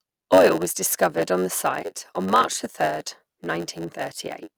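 Throughout, the speech carries a steady buzz at 91.9 Hz and plays at 0.919 times normal speed with its timbre intact. This is a block size mismatch (padded). Each written block falls short of the block read next, leaving a zero-filled gap in every one.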